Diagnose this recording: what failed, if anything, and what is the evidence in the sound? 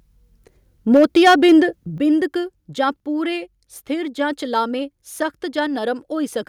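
From 0.94 to 1.55 s the loudest speech turns harsh and crackly, with peak tops flattened. This is likely microphone overload at the converter stage: input ran about 7 dB past full scale, so around 7 percent of samples were clipped.

Speech and background drop abruptly in level twice: by about 2 dB at 0.97 s, inside the distorted stretch, and by about 7 dB at 1.98 s. This points to microphone volume stepped down by the call processing, likely automatic gain control cutting the device input after detecting clipping.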